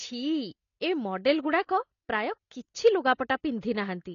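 From start to finish the speech is band-limited, with nothing above 6.9 kHz, and carries a plainly audible smeared, fizzy texture on sibilants. This likely comes from AAC compression at a low bitrate, around 24 kbps. Unlike a simple low-pass filter, the damage also warbles within the remaining band.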